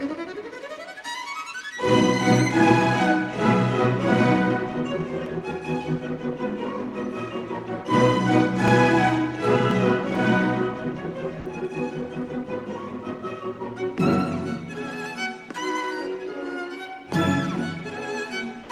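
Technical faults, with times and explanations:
8.68 s and 9.71 s, dropped buffer (overrun): two jumps where the audio skips ahead by just a few milliseconds. Likely the program didn't collect its samples before the hardware overwrote them.
11.40 to 11.46 s, sound dropped by the voice detector: about 50 ms of sound gives way to 60 ms of comfort noise, likely because the sender's detector took it for background, which fits Opus DTX.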